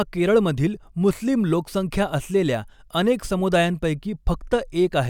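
A speech recording with nothing technically wrong with it.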